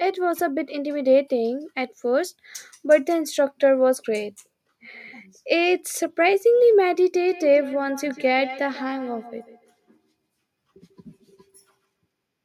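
From 7.27 s to 11.88 s the speech is shadowed by feedback echo between two devices. A second device in the same room plays the call back, and this microphone picks it up again. Its own echo canceller ignores sound it did not play itself. Each word returns at a steady gap of roughly 150 ms, at its loudest about 19 dB below the speech, thinner and more ringing each pass. Room reverberation smears continuously, whereas this repeats at a fixed interval.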